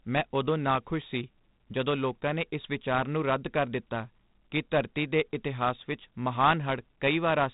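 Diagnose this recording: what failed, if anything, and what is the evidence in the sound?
The codec stage failed: 4-bit ADPCM compression runs through the whole speech clip. A gritty hiss rides on loud syllables and vanishes in pauses, unlike a steady noise floor. Attacks distort, and nothing sounds above 3.8 kHz, which fits a 32 kbps stream.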